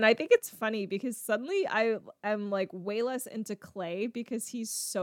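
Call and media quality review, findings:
Sudden gain jump at 0.38 s: speech and background noise drop together by about 6 dB, persisting to the end. Likely cause is a digital gain setting or one-bit shift applied instantly, without a ramp. Waveform shows a hard step in envelope amplitude at one sample. Spectrogram shows every band, including the noise floor, dimming uniformly at that instant, possibly with a thin vertical click line.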